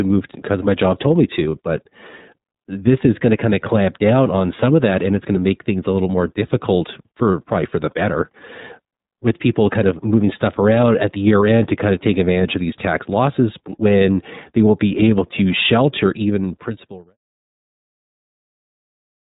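The whole clip of speech has been passed through the iLBC codec, a narrowband VoIP coder that encodes the excitation of each frame on its own, without reference to the previous one. It runs with 30 ms frames at about 13.3 kbps, and the damage is plainly audible. Nothing above 4 kHz survives, so the speech sounds dull and boxed-in, with plainly audible roughness and a synthetic, buzzy edge. The smooth fade-out from around 16 s to 17.17 s carries the same coded sound.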